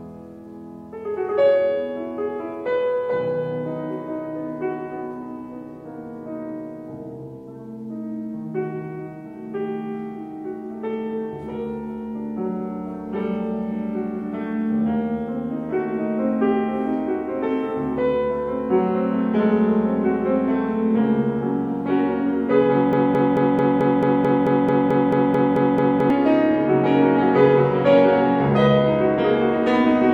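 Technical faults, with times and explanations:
22.93–26.10 s, broken-record loop: the player, encoder or stream likely stalled here and kept re-sending the last fragment it still held instead of fresh audio. A slice of about 0.22 s plays over and over, back to back, 14 times across roughly three seconds. Each repeat is identical, so the sound becomes a rigid, mechanical stutter. The audio that belonged in that span never plays and is lost.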